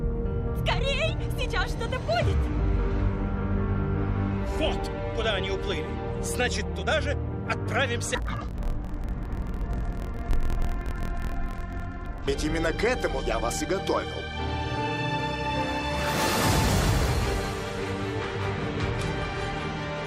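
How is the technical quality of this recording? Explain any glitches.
The recording has one glitch: interleaved audio read as planar, from 8.15 to 12.30 s. Each 24 ms block is split in halves, so the sound drops an octave and buzzes at 41.7 Hz, yet pacing stays correct, unlike a sample-rate error.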